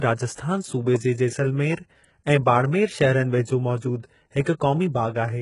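From start to finish the top end sounds synthetic: s sounds come out gritty and metallic, and nothing is left above about 11.1 kHz. That's likely HE-AAC compression, rebuilding treble by copying lower bands upward, with heavy damage that fits a bitrate around 12 kbps.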